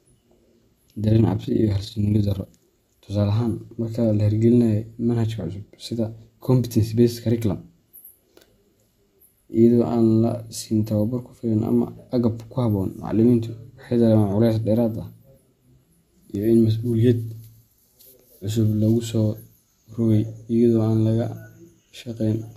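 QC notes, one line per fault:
1.04–2.48 s: overlap-add ripple. The speech level pulses by about 6 dB at a rate of around 30 times a second, a rough flutter. The frames were rejoined with an overlap whose window gains don't sum flat, so the level rises and falls once a frame.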